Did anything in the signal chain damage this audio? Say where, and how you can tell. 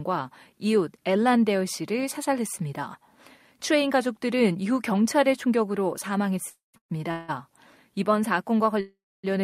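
Yes, there are call audio freezes, likely from packets stalling on the network so the receiver's jitter buffer ran dry. Three come in quick succession at 6.49–6.76, 6.78–6.99 and 7.11–7.30 s, then a longer one at 8.80–9.26 s. In each, the last sound is stretched into a fading buzz that drops to silence for up to about 260 ms, except the 7.11 s one, which never goes quiet. Speech then resumes where it left off, so nothing's lost, just gaps inserted that push playback later.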